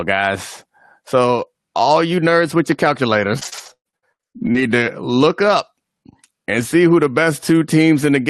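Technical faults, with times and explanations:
3.39–4.63 s, repeated packet loss (robotic sound): the speech turns choppy, with fragments dropping out. Packets went missing in quick succession, and each hole, up to 114 ms long, was filled by extending the preceding sound, so about a third of this stretch is concealment.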